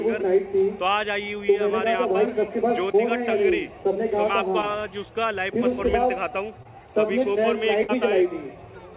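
At 2.92 to 2.96 s, 4.62 to 4.65 s and 6.63 to 6.67 s come three short concealed packet losses. Each time about 20 ms of audio was missing and the receiver extrapolated the preceding sound to fill it, audible as a brief smear or wobble. On a spectrogram, each shows a short stretch of smoothed, repeated content. The waveform shows a patch that doesn't match its neighbours.

At 7.83 to 7.90 s a burst of packet loss drops about 60 ms. The receiver continued the last sound and faded it over the gap, giving a held buzz or dying hiss before the audio jumps ahead. A spectrogram shows frozen, decaying bands under the call path's 4 kHz ceiling.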